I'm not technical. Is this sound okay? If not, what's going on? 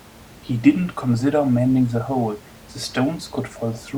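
Yes, the sound is technically fine: nothing is going wrong in the recording or playback, and the faint background noise you may notice under the speech is just the normal sound of the room the microphone was in.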